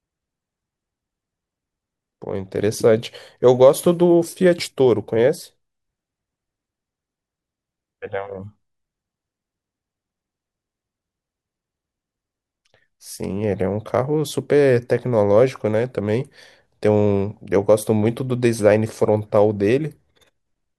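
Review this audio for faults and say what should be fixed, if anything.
No faults; nothing needs fixing.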